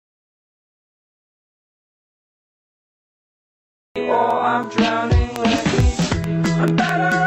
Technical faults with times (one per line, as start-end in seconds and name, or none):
5.36-7.13 train of clicks